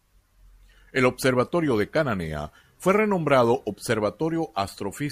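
No technical fault can be heard anywhere in the signal of this speech recording.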